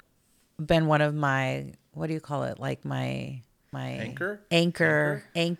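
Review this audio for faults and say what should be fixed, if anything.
A doubled audio track starts abruptly at 3.73 s and runs to the end. A second full-band copy of the speech trails about a second behind, roughly 5 dB quieter, likely from a slower duplicate capture path. Unlike room echo, it has no decay or colouring. Prevent this by routing each source through only one capture path.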